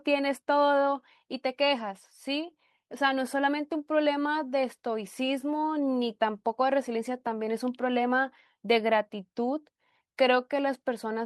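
No technical faults can be heard anywhere in the speech.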